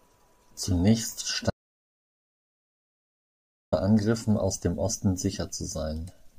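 At 1.50 s the speech cuts off abruptly and the clip falls to silence until 3.72 s, when it resumes mid-flow. This is an audio dropout to silence lasting about 2.22 s. No room tone or noise floor survives in the gap, so the recorder kept writing silence while its input was absent, likely from a lost device connection, a failed link or an unintended mute. Whatever was spoken during that span is unrecoverable.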